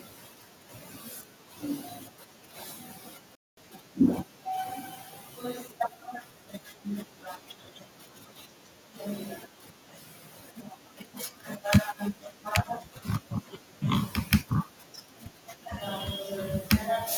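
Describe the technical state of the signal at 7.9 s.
At 7.9 s the speech signal is intact, with no audible fault at that moment.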